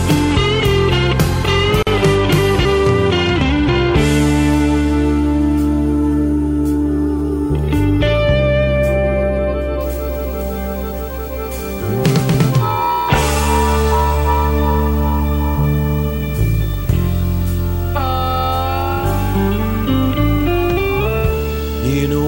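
At 1.83 s the sound breaks off for about 43 ms and resumes at 1.87 s exactly where it left off. This is a gap at a join of encoded pieces: separately encoded sections were joined untrimmed, so encoder delay and end padding remain as silence. Unlike a dropout, nothing is lost.

From 9.81 s to the end, video or display buzz appears: a rasping 59.94 Hz buzz with hash above it and a whistle near 15.7 kHz at the line rate, roughly 15 dB below the signal. The line tone and the slightly off-60 rate set it apart from mains hum.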